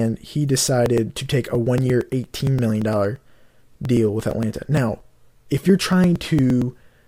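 From 0.86 s to 6.96 s, something repeatedly stalls the USB link or audio driver every 0.115 s, producing periodic USB or driver dropouts. At each stall, roughly 10 ms of audio is skipped outright rather than padded with silence, so the speech jumps forward around fifty times. Each splice leaves a small discontinuity, heard as a steady train of ticks, close to nine per second, riding on the speech wherever there is signal.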